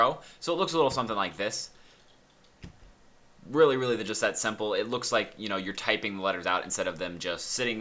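No technical faults are audible.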